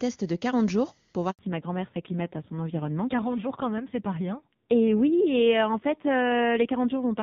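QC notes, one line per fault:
1.31–1.39 s, handover gap: right after "jours pour" the speech fades out within a few tens of milliseconds and stays silent for 80 ms while the call moves to another network and no speech frames arrive. The missing syllables are simply gone. Unlike a packet-loss concealment burst, nothing is filled in: there is no buzzy repeated fragment, just true silence. And unlike a dropout from a level gate, the tonal character changes when the sound returns.
1.39 s to the end, fallback to narrowband: once the sound resumes, nothing remains above 4 kHz, so sibilants lose their edge and the voice turns dull and somewhat rough for the rest of the clip. Before the gap, the clean HD Voice band up to about 7 kHz fits AMR-WB at 23.85 kbit/s. The coarse, slightly gravelly texture afterwards fits AMR-NB at around 5.9 kbit/s. A fixed low-pass filter would cut the band from the start. 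This cut appears abruptly at the handover.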